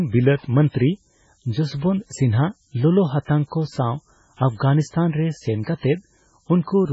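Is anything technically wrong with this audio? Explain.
Yes. Throughout, the speech is quantized very coarsely, consistent with 8 bits, and noise shaping pushes the rounding error upward, leaving a steady treble-heavy hiss roughly 25 dB below the speech.

Also throughout, the audio was likely squeezed by MP3 compression at a very low bitrate, around 16 kbps. Nothing survives above 7.7 kHz, and heavy damage leaves watery, swirling sibilants and smeared attacks.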